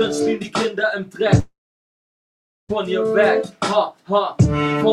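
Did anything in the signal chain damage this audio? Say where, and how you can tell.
Yes: a long network dropout at 1.39 to 2.71 s. The last sound smears into a fading buzz, then 1.16 s of silence, likely from lost packets.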